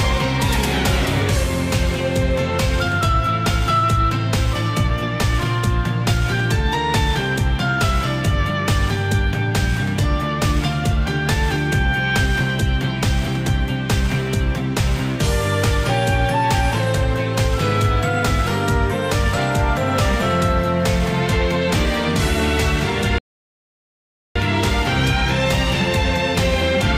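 At 23.18 s the sound drops to silence, then picks up again at 24.36 s exactly where it stopped. This is a rebuffering stall. Playback ran out of downloaded audio and waited for more. Nothing is missing, but about 1.17 s of dead air is added.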